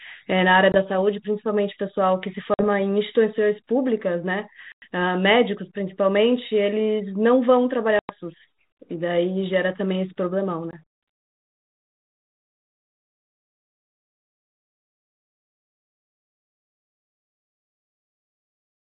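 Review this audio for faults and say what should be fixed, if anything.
Packet loss on an ADPCM call produces silent gaps at 0.72 s (20 ms), 2.54 s (50 ms), 4.72 s (100 ms), 7.99 s (100 ms) and 10.71 s (20 ms). During each gap the G.726 decoder's predictor and step size drift from the sender's, so the speech resumes with brief distortion that settles within some tens of milliseconds. To prevent this, add jitter buffering with packet-loss concealment, and reset or resynchronise the ADPCM decoder state after lost packets.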